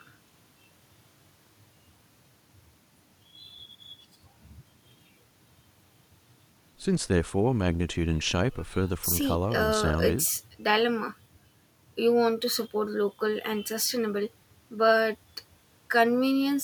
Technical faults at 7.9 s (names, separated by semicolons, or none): none